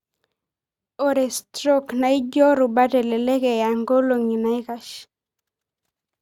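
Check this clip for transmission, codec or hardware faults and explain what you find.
Nothing stood out on listening to this speech recording.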